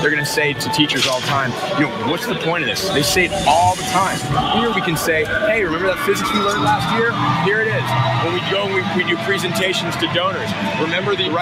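Throughout, a noise suppressor applied to music or sounds treats sustained tones and tails as noise, dipping them by around 5 dB while attacks pass, unlike compressor pumping, which follows loudness.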